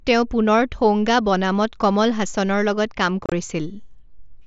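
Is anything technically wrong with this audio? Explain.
Yes. From 3.24 to 3.32 s the speech breaks into a rough, chopped burst with abrupt holes. This is unconcealed Bluetooth headset packet loss: about 60 ms of short voice packets between headset and phone went missing over a 75 ms stretch, the longest gap 30 ms, and silence or an idle pattern filled them. The link's mSBC codec still carries speech up to 8 kHz around the dropouts.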